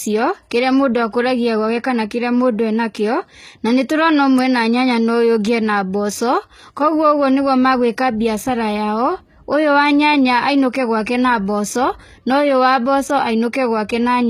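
From start to finish the speech carries plainly audible codec damage, most likely HE-AAC compression at a low bitrate, which fits roughly 20 kbps. The core codec keeps only the lower spectrum, and the treble is synthesised by copying lower bands upward under a coarse envelope, so s sounds come out gritty and metallic. On a spectrogram the upper region looks smeared and blocky rather than finely detailed, and everything stops sharply at 14.9 kHz.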